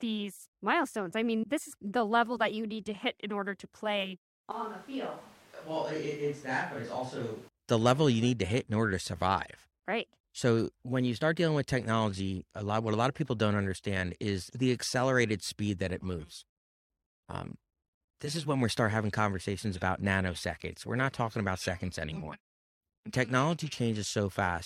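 Between 4.52 and 7.49 s, after "in order to play", the close microphone's signal likely fails and the recording switches to a distant microphone. The speech turns suddenly roomy, hollow and thin, roughly 10 dB quieter with room noise near 25 dB below it, until "the level you need".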